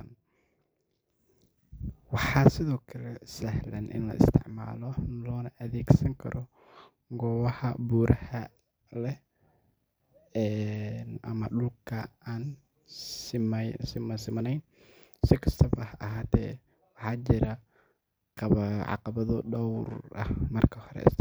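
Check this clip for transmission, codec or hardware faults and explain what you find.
Nothing faulty can be heard anywhere in this recording.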